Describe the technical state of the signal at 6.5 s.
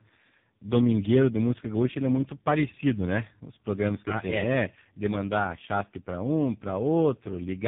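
Tandem speech coding at 6.5 s, as throughout: three speech codecs in series each re-encode the last one's output, leaving rough, warbly, muffled speech with nothing above 3.6 kHz.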